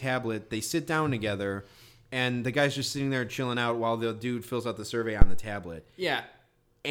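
A phantom power thump lands at 5.22 s, just after "fills out the survey", lasting until about 5.48 s. Switching the supply on the live input pushed a voltage step through the coupling capacitors, producing a deep thud peaking near about -3 dBFS that decays in roughly 59 ms.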